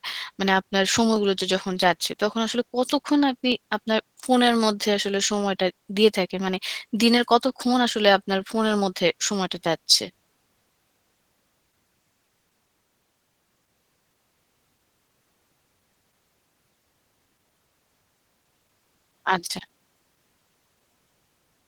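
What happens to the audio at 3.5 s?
At 3.52 s there is a single sharp click, a brief discontinuity that shows as a thin vertical line across the spectrum. The likely cause is dropped samples: a fraction of a millisecond of the stream is missing, so the waveform jumps straight to a later value. Nothing audible is lost beyond the click itself.

Opus voice compression is also present at this point, as it is across the whole clip. At 16 kbps in hybrid mode, SILK codes the speech band and a thin CELT layer covers the range above 8 kHz. The coarsely coded excitation leaves the speech plainly muffled, hoarse and slightly robotic.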